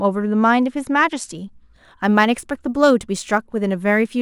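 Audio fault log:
1.36 s to the end, sample clock jitter: samples land early or late by around two microseconds, so steep, bright parts of the speech gain a hiss about 40 dB down that vanishes in pauses; a spectrogram shows faint high-frequency haze following the speech energy.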